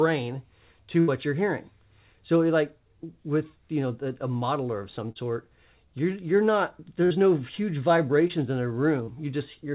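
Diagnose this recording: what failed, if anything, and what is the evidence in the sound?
Burst of packet loss in the network at 1.0–1.1 s and 7.05–7.17 s: the receiver stretched and faded the last sound, then resumed with 80 ms and 40 ms skipped.

Short concealed packet loss, also network-side, at 5.12–5.17 s, 8.28–8.32 s and 9.04–9.09 s: late packets left brief holes the decoder patched, heard as quick smears before real audio returns.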